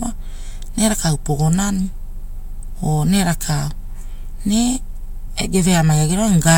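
Speech recording, and nothing in it is technically wrong.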